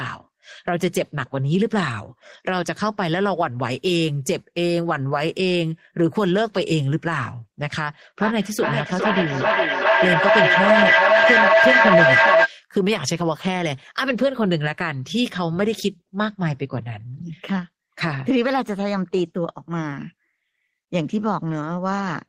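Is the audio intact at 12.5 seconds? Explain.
No. From 8.22 to 12.54 s there is feedback echo between two devices. One device replays the other's microphone, which picks the sound up again. Speech returns about every 400 ms, thinner and ringing, and builds to about 6 dB above the speech.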